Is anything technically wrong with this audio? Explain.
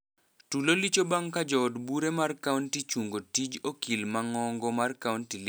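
No, nothing technically wrong stands out in this speech recording; it all sounds just as it should.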